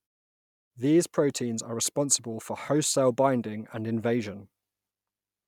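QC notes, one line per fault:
No faults to note in this speech clip.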